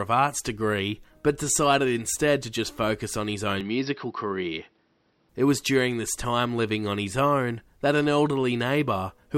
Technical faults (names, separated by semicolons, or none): input switched to a poorer device